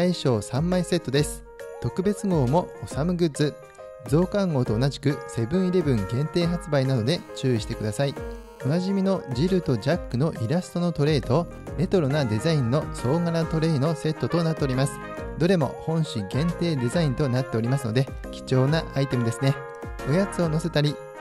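GSM phone buzz runs from 7.07 to 8.61 s. A 2G phone close by is in a call, transmitting radio bursts about 217 times a second, and some stage of the audio circuit rectifies those pulses into the signal path. The result is a hard, raspy buzz pitched at 217 Hz and thick with harmonics, steady across the stretch and unrelated to the sound itself, sitting about 28 dB below the signal.

GSM signalling bursts follow from 8.67 to 11.73 s. The same phone, still in the call but with its user silent, now transmits only intermittent groups of bursts instead of a continuous stream. Each group is rectified just as before, so the steady buzz breaks up into even ticks with a longer 217 Hz buzz twice a second. It sits roughly 25 dB under the signal, slightly more prominent than the continuous buzz before it.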